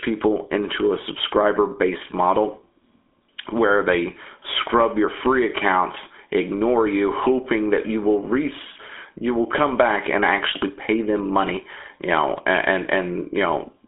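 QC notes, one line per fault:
Throughout: GSM full-rate codec. The speech carries a plainly audible buzzy, gravelly roughness, consistent with a 13 kbps GSM full-rate coder. It models the vocal tract and excites it with a coarse, regularly spaced pulse train, so the voice sounds rasped rather than smooth. The band runs from about 250 Hz to 3.5 kHz, with nothing above 3.8 kHz. That grit separates it from clean telephone band-limiting, which narrows the sound without adding texture.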